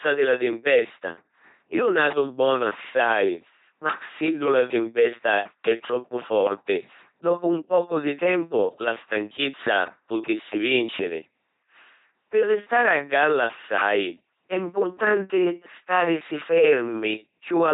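Right through the speech you get the buzzy robot sound of an LPC-10 vocoder at 2.4 kbit/s. Each moment is forced fully voiced or fully noisy, so it's heavily mangled, with nothing above 3.8 kHz.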